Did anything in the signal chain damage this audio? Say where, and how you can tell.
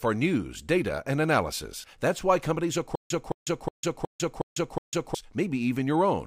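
Yes. Stutter with silent gaps, 2.95 to 5.15 s, after "why companies": a 217 ms fragment repeats six times, each followed by 149 ms of digital silence on an even 365 ms cycle. This is likely a stalled playback buffer replaying its last fragment at each retry. The audio due in that span is lost.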